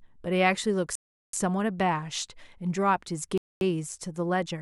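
At 0.95 s the speech cuts to silence for about 0.38 s, resuming at 1.33 s; a second gap runs from 3.38 to 3.61 s, about 0.24 s. These are likely Bluetooth stalls, where interference delayed packets until the headphones' buffer emptied and playback paused.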